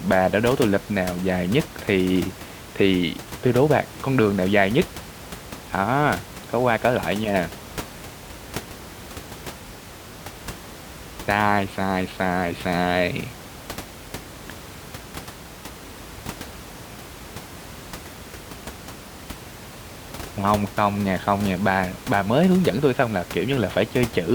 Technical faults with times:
none

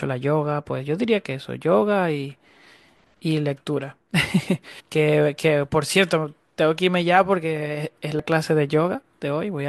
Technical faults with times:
2.62 compressed frames skipped
4.79 compressed frames skipped
8.19 compressed frames skipped

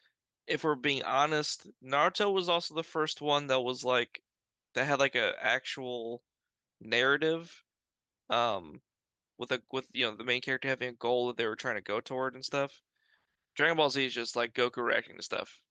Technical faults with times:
none

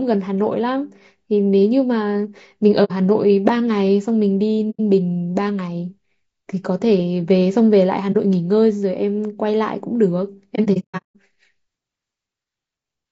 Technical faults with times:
0.00-13.11 low-delay AAC compression
2.84-2.92 AAC frame loss with muting
4.70-4.80 AAC frame loss with muting
8.12-8.16 AAC frame loss with muting
10.55-11.16 AAC frame loss with muting

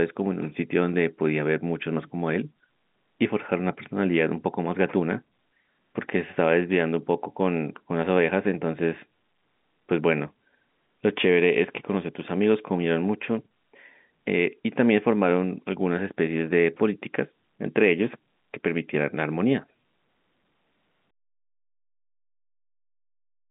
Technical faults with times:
none

